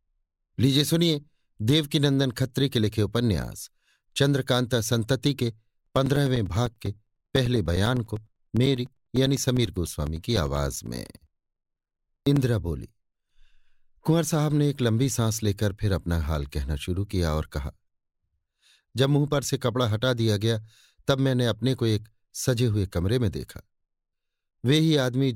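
From 5.86 s to 12.37 s the speech carries periodic USB or driver dropouts: every 0.1 s a few milliseconds of audio are lost and replaced by silence as the bus or driver stalls, giving around seventy evenly spaced ticks heard only under signal.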